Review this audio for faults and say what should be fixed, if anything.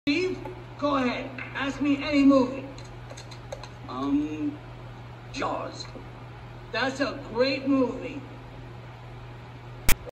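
At 9.89 to 9.92 s, a short, harsh burst of static cuts in with hard edges. This is file tags played as audio. A block of text metadata was read by the decoder as if it were sample data. Text bytes fall in a narrow range of values, so they produce a loud rasp pushed off to one side rather than centred noise. The burst lasts about 33 ms and ends as abruptly as it starts. To prevent it, the decoder or export step should skip tag blocks so only true audio frames reach playback.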